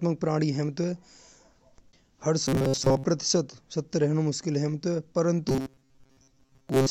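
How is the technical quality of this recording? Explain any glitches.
The recording has two glitches, both robotic sound from repeated short buffers. From 2.45 to 3.04 s and from 5.49 s to the end, the speech turns into a rigid metallic buzz at 134 Hz. That pitch fits a roughly 7.5 ms buffer being replayed while most of the real audio is skipped, likely because new data arrived too seldom. Unlike a dropout, the sound never falls silent, and the buzz holds one fixed pitch.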